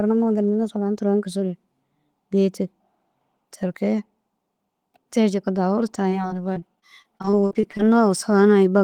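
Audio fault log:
6.09–7.81 s, repeated packet loss (robotic sound): short holes, none longer than 40 ms, come in quick succession. Each is bridged by extending the sound just before it, so about a fifth of the span is fill. Unlike an isolated dropout, the constant patching sounds choppy.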